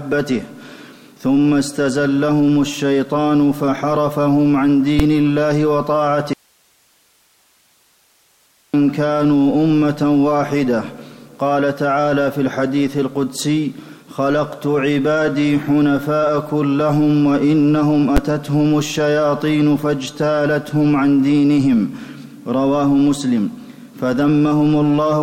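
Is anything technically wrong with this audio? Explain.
Yes, two kinds of fault are audible.

Invalid numbers at full scale occur at 4.99 s and again at 18.17 s. In each case a calculation produced infinite or invalid values, which the output clamped to its extreme positive or negative limit for one processing block. The first lasts about 5 ms, which fits a 256-sample block. The second lasts about 11 ms, which fits a 512-sample block. Both are so brief that each is heard as a single sharp, very loud bang.

An audio dropout to a faint residue runs from 6.33 s to 8.74 s, a gap of about 2.4 s. The sound cuts off abruptly in mid-flow and returns just as suddenly, with nothing like a fade or natural pause at either edge. During the gap only hiss remains, about 40 dB below the normal level. This is likely a break in the signal path upstream while the stages after it stayed live, so their own noise carried on through the gap.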